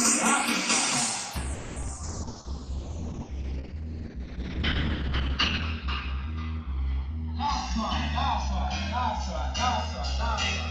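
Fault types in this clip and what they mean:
channels drifting apart: The two channels run on clocks that disagree by around 150 parts per million, so the delay between them creeps steadily across the clip until it reaches about a millisecond and a half. Summed to mono, the comb-filter notches glide slowly through the spectrum, giving a continuous flanging sweep. Unlike a fixed offset between channels, which gives a static hollow colouring, the colouring here keeps moving for the whole clip.
call audio freeze: From 1.53 to 1.78 s the last sound is stretched into a fading buzz or hiss lasting 0.23 s, with no drop to silence. The likely cause is packets stalling in transit so that the jitter buffer ran dry. When the audio resumes it carries on from where it stopped, so nothing is lost but everything afterwards arrives later. That separates it from packet loss, where sound is actually missing.
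short concealed packet loss: Right after the freeze, three brief smears start at 1.82, 1.87 and 1.96 s. In each, about 10 ms of synthetic continuation covers a hole where real audio went missing, 40 ms at the first and 20 ms at each of the others. These events remove sound and pull the timing back. The freeze only delays the audio. The much shorter length and the wobbly blend back also set these apart from the long held sound before them.
call bitrate drop: From 2.05 s to the end, the encoder falls from 32 kbps to 7 kbps, and the audio bandwidth shrinks from 20 kHz to 8 kHz. The sound turns muffled and coarse, with a watery roughness that is worst during the roughly 3.1 s spent at the lowest rate. This is a lasting change in tone and detail, not a timing event. That distinguishes it from the brief packet-loss smears and the stretched passage nearby.
jitter buffer slow-down: From 2.32 to 2.66 s the receiver repeats single pitch periods or bits of pauses to rebuild its reserve. 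It adds 64 ms and plays that stretch at about 84% speed. The audio sounds drawn out, but the pitch stays put. A tape-style slowdown would lower the pitch, and the freeze holds one sound frozen instead of stretching the ongoing audio evenly.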